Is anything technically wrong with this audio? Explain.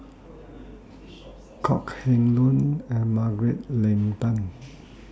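No, nothing is technically wrong.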